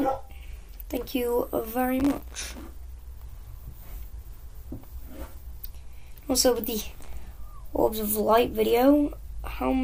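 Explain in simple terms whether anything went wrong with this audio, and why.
Two bursts of processor overload crackle break up the audio, from 2.0 to 2.62 seconds and again from 6.92 to 7.13 seconds. The computer fell behind and kept missing its deadlines for tiny chunks of sound, and each miss left a brief hole of silence. The holes are so short and so many that they fit chunks of under a millisecond each, and they blur into a gritty tearing. A single dropout would be one clean gap. This rough texture rides over the sound and stops once the load eases.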